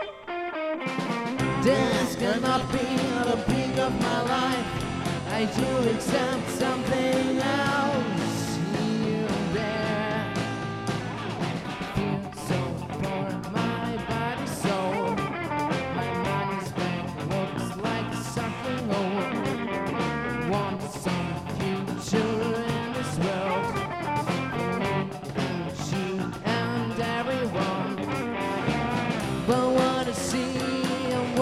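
From start to finish a steady whine of fixed pitch sits at 1 kHz, roughly 40 dB below the signal. This is USB whine: current drawn by the bus in 1 ms frames leaks in through power or ground, producing a constant tone.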